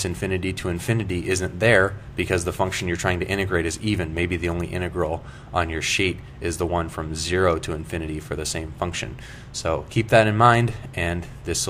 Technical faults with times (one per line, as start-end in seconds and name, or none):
none